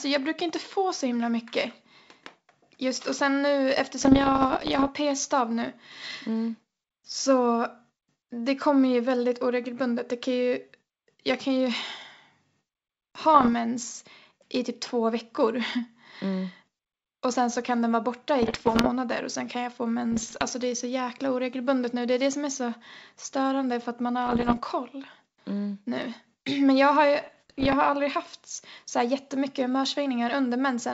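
Speech over a G.722 wideband link shows bit errors on an ADPCM link at 4.01–4.89, 13.35–13.49, 18.43–18.89, 20.12–20.43, 24.27–24.59 and 27.21–27.75 s. Under a percent to about two percent of bits are flipped. Each error throws off the decoder's step size and predictor, so the pops ring on as rough bursts with brief level swings. Packet loss would instead leave clean gaps or repeated fragments.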